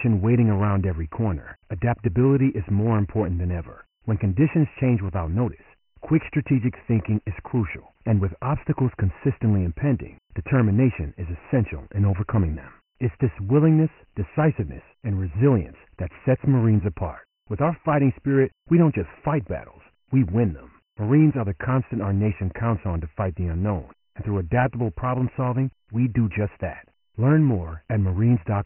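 Dialogic VOX ADPCM damage runs throughout the speech, coded with OKI-style 4-bit ADPCM at 24 kbps, which fits 6,000 samples a second. Nothing sounds above 3 kHz, so the voice is muffled, and heavy quantisation leaves a gritty hiss trailing the speech.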